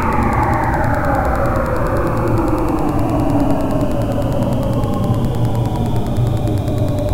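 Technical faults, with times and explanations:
Throughout, Wi-Fi interference: a nearby Wi-Fi radio's transmissions are picked up and rectified by the audio circuit, so its beacon, sent every 102.4 ms, comes through as a steady ticking close to ten times a second, roughly 25 dB below the main sound.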